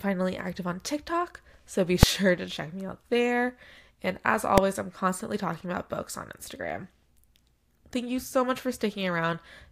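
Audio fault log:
2.03 s and 4.58 s, invalid numbers at full scale: a sharp, very loud bang just before "to check me out" and another just before "I'm constantly talking about". A calculation produced infinite or invalid values, which were forced to the largest sample value, pinning the output at one extreme value far beyond the speech peaks for a whole block. The blocks last about 2.9 ms and 0.73 ms, which fits 128-sample and 32-sample blocks, so each is too brief to separate into two pops and lands as a single bang.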